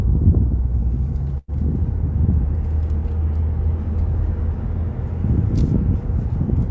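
A call audio freeze at 1.38 to 1.50 s interrupts this recording of sounds, which comes through a call path with nothing above 8 kHz. The last sound stretches into a fading buzz or hiss for about 100 ms, then 20 ms of silence, likely because delayed packets emptied the jitter buffer. Playback then resumes where it stopped, later but with nothing lost.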